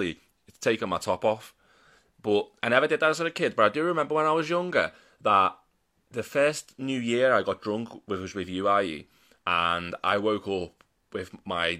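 Nothing in this speech recording stands out as a technical fault, so there's no moment that needs a closer listen.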